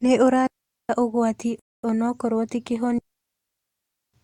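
At 0.47 s the speech drops into a clean hole that lasts until 0.89 s, about 430 ms of near silence. That's a digital wireless dropout: the radio link lost more data than it could cover, so the receiver just muted with a very quick fade. You can tell it's that kind of failure because there's no crackle or noise burst at either edge. The audio simply vanishes and comes back.

At 1.59 s there's a different kind of gap, a rebuffering stall running to 1.84 s. The player ran dry of downloaded audio and paused for about 240 ms until more arrived. When it picks up again it carries on from exactly where it stopped, so nothing goes missing, but the pause stretches the timing.

The second digital wireless dropout is the long one, from 2.98 s to 4.14 s. That's roughly 1.15 s of the same clean muting with no noise around it.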